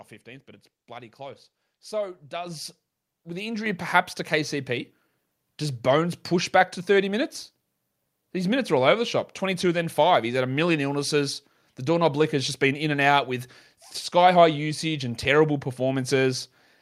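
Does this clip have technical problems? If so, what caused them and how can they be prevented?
Yes. At 2.46 s and again at 3.66 s, the speech and background noise jump louder together by about 6 dB: the microphone volume stepped up. The call software judged the input too quiet and raised the device's input level abruptly each time. Disabling automatic microphone level adjustment and setting the input volume correctly beforehand prevents it.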